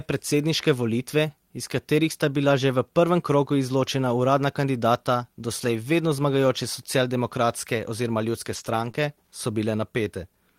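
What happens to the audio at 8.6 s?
Lost packets rebuilt from error correction affect the speech between 8.55 and 8.89 s. Each missing packet was replaced by the low-bitrate copy carried in the packet after it, about 180 ms in total, so there is no gap, but those frames sound rougher and noisier.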